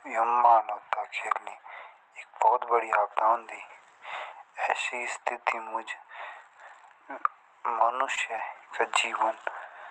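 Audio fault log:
8.15–8.19 s, short concealed packet loss: about 20 ms of audio arrived too late to decode, so the receiver extended the preceding sound and blended back, leaving a brief smear or wobble.
8.17–8.19 s and 8.38–8.40 s, lost packet rebuilt from error correction: each 20 ms packet was replaced by the lower-bitrate Opus copy carried in the next packet, so those moments sound rougher and noisier, with no gap.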